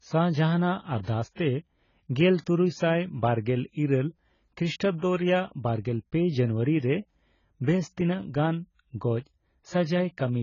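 Speech runs throughout with heavy AAC compression damage, likely from AAC-LC at a low bitrate. Nothing is present above 7 kHz, so sibilants lose their edge and the voice sounds dull. With so few bits per frame, the encoder drops or coarsely fills high bands. That leaves a smeared, watery texture on sustained vowels and a fizzy grain on fricatives. The degree of damage fits an encode at around 16 kbps.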